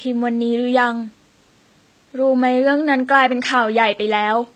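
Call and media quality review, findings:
Low-bitrate audio saved at a high bitrate, throughout the speech. Dull, smeared top end with a metallic, swirly upper band and soft consonants. Likely cause: an early low-bitrate HE-AAC pass, around 20 kbit/s, later re-encoded as high-rate MP3. The MP3 stage cannot restore the removed detail. Room noise sits about 43 dB below the speech.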